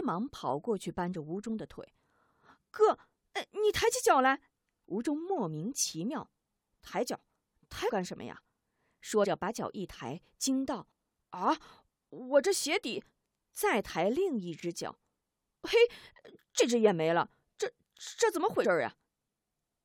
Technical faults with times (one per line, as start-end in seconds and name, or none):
7.88-7.91 compressed frames skipped
9.23-9.25 compressed frames skipped
16.59 compressed frames skipped
18.63 compressed frames skipped